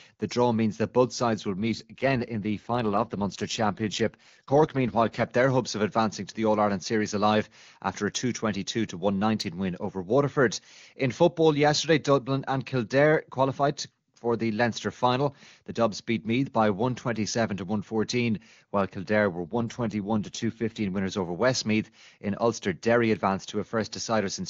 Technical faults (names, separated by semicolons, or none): AMR rate drop